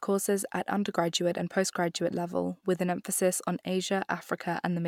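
Nothing stood out on listening to this short speech recording.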